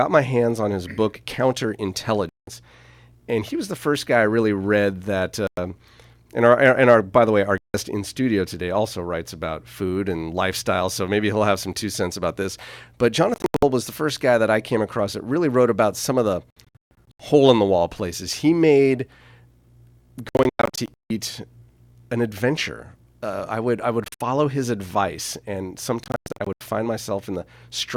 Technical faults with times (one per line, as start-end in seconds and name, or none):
2.29-2.48 Bluetooth dropout
5.47-5.58 Bluetooth dropout
7.58-7.74 Bluetooth dropout
13.34-13.63 Bluetooth dropout
16.50-17.20 Bluetooth dropout
20.29-21.10 Bluetooth dropout
24.04-24.21 Bluetooth dropout
26.04-26.61 Bluetooth dropout